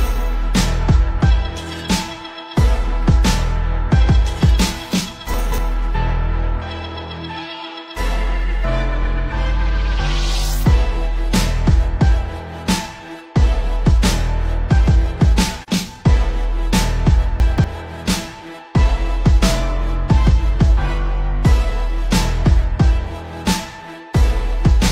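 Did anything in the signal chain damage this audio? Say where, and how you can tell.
Yes. The first fault is chunks out of order, at the buffering or network stage. Between 5.34 and 5.58 s, and again between 17.4 and 17.64 s, one 60 ms chunk of audio arrives late and plays three chunks after its proper place. No audio goes missing, but the order is scrambled across each 240 ms span. You hear a brief jumbled stutter, with three hard joins where mismatched waveforms meet.

The second fault is AAC frame loss with muting, at the codec stage. At 15.63 to 15.68 s there is a dip about 42.7 ms long, which fits one lost AAC frame. The decoder had nothing for that frame and set its spectrum to zero. The overlapping transform windows then fade the sound out and back in around the gap, so it is a brief dip.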